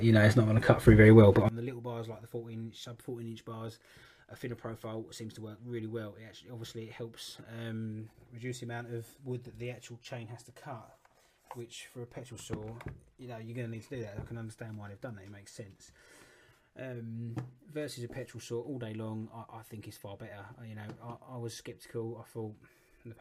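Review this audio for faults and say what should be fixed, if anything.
From 1.49 s to the end, the sound drops by about 24 dB when summed to mono. The likely cause is one channel inverted, so content common to both channels cancels. The waveform envelope shrinks abruptly there, and a spectrogram shows energy fading across the band. Checking channel polarity with a correlation meter before export would prevent this.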